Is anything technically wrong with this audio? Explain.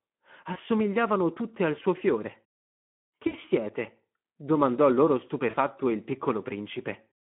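Yes. The speech sounds hoarse, grainy and noisy throughout, confined to a telephone band of about 150 Hz to 3.4 kHz. This is Speex codec damage, consistent with a low bitrate around 11 kbps that leaves too few bits for the excitation.

At 0.53–0.58 s, 3.27–3.37 s and 5.49–5.57 s, the sound briefly smears into a fading buzzy tone or coloured noise and stays weak just afterward. This is VoIP packet loss concealed by the speech codec. The decoder covers gaps of about 20, 60 and 40 ms by extrapolating its last pitch and filter at falling gain.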